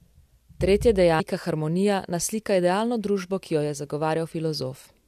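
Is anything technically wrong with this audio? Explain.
Yes. At 1.19 to 1.21 s the speech is interrupted by a brief glitch. This is damaged data in a compressed stream: corrupted bytes make the decoder misread the affected frames and lose sync until it finds the next valid frame header.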